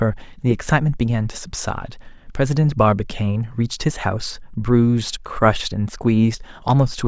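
Nothing stood out as a technical fault anywhere in the recording on listening.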